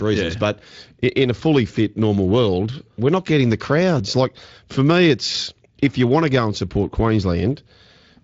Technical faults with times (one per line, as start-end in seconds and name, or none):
none